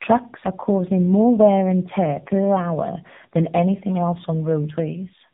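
Speech with tandem speech coding across all 5 seconds: the sound is rough, muffled and warbly, with nothing above 3.8 kHz. It fits two AMR-NB stages bridged by a G.711 link, each coder re-encoding the previous coder's already degraded output.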